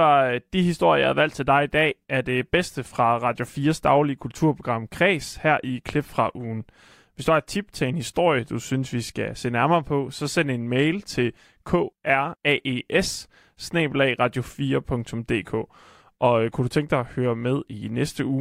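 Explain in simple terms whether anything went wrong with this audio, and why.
A loud pop at 5.89 to 5.91 s, between "her i" and "fra ugen", is a single sharp thump, likely a plug, switch or static discharge. The speech continues underneath without a gap.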